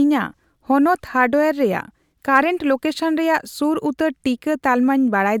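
Nothing goes wrong anywhere in this bit of speech, so there's no technical fault to point to.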